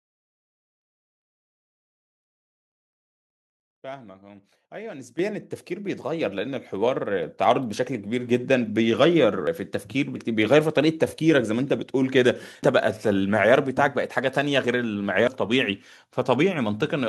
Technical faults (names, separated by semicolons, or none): microphone volume stepped up; dropped buffer (overrun)